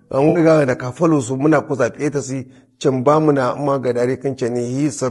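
From the start, the speech sounds rough and grainy, most likely from low-delay AAC compression (AAC-ELD), at a rate that fits roughly 32 kbps. Short frames resolve the pitch harmonics poorly, so a spectrogram shows noise filling the gaps between harmonic lines and a thin, synthetic-looking top band.

Between 0.29 and 0.39 s, AAC frame loss with concealment causes a smeared, phasey patch, which fits about 60 ms of missing data. The decoder rebuilt it from the last good spectrum, so the waveform there looks noisy, and the spectrogram shows blurred, washed-out harmonics.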